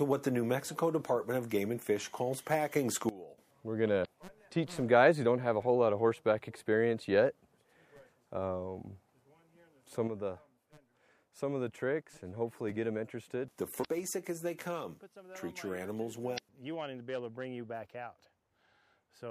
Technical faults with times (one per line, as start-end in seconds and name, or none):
3.09-3.38 sudden gain jump
4.01-4.06 damaged data in a compressed stream
10.07-19.30 sudden gain jump
13.81-13.85 damaged data in a compressed stream
16.34-16.39 damaged data in a compressed stream